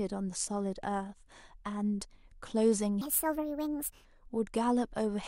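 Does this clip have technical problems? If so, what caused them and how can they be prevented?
Yes. From 3.01 to 4.05 s the speech turns high and hurried, running 1.5 times too fast and about 7 semitones sharp. This is a wrong sample rate fault: audio captured at 32 kHz is played back at 48 kHz without conversion. Resampling to the output rate prevents it.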